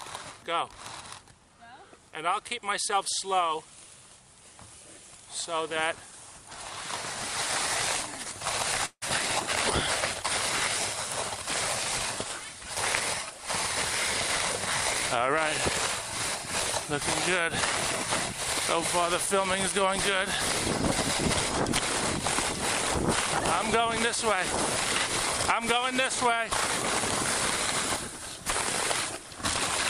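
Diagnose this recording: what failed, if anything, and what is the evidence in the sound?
At 8.85 s the sound stops advancing and its last moment is stretched into a fading buzz or hiss. The final 70 ms or so falls to silence before the audio resumes at 9.04 s, exactly where it left off. This is a call audio freeze at the network and jitter-buffer stage, likely caused by packets held up in transit that let the buffer run empty. About 163 ms was filled in and nothing is missing, so this is an inserted gap that adds delay. A packet-loss dropout would remove material instead.

From 25.08 to 26.51 s the jitter buffer speed-up runs the audio at about 104% speed with the pitch unchanged. The receiver cuts short pieces of one or a few pitch periods, many times in a row, to drain excess buffered delay, removing about 50 ms in total. The pitch holds steady, which separates this from a sample-rate or clock mismatch, where speed and pitch rise together. 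The trimming is spread across the whole stretch, which separates it from a single skip or splice.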